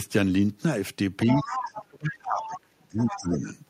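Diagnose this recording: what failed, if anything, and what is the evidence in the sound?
Other side's voice leaking through, in call processing: a second voice sits at 1.20–1.82 s, 2.42–2.59 s and 2.98–3.39 s, likely loudspeaker echo the canceller missed.

Speech suppressed in double talk, 1.42–3.48 s: the talker drops by up to about 30 dB under the echo, likely the canceller turning both sides down.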